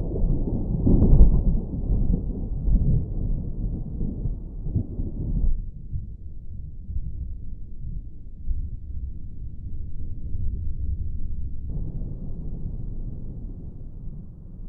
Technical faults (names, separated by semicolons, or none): section at the wrong speed